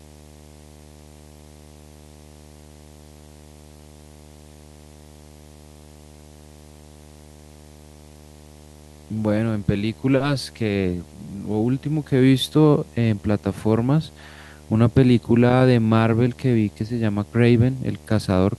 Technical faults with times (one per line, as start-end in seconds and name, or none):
0.00-18.59 video or display buzz